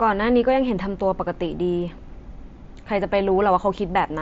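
At 0.68 s there is concealed Bluetooth headset packet loss. A 15 ms gap, which fits two lost headset frames, was filled by repeating the closest-matching recent waveform. It passes as a brief buzzy blip with a slight warble on recovery, over mSBC-limited wideband audio.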